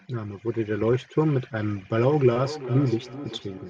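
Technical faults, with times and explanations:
1.84 to 3.7 s, feedback echo between two devices: from 1.84 s to the end, the speech returns as a delayed copy about every 0.4 s, peaking at about 13 dB below the direct speech. A second device in the same room is on the call and plays back what this microphone sent. The microphone then picks that playback up again. Its echo canceller only removes audio from its own loudspeaker, so the returning copy passes through, sounding thinner and more ringing than the original.
2.33 to 2.43 s, short concealed packet loss: within this span, about 20 ms of the stream never reached the decoder in time. The receiver covered roughly 17 ms of the gap by extending the last sound it had, carrying its pitch through voiced parts or substituting shaped noise for unvoiced ones, before cross-fading back into the real audio. That splice leaves a brief smear or wobble and shifts the timing slightly, adding a few milliseconds to the stream.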